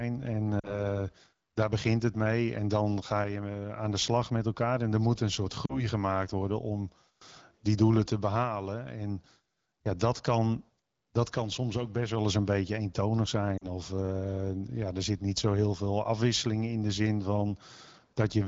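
At 0.60 to 0.85 s, 5.65 to 5.85 s (between "er moet een soort" and "gemaakt worden om") and 13.57 to 13.66 s (after "eens een beetje eentonig"), lost AMR speech frames cause the sound to drop to near silence within two frames, which fits about 40 ms of missing speech. The decoder repeats the last good pitch and vocal tract settings at falling gain. Unlike a hard dropout, the sound smears and fades rather than cutting to clean silence, and resumes weak or rough for a moment within the light coding of the AMR wideband (HD Voice) codec.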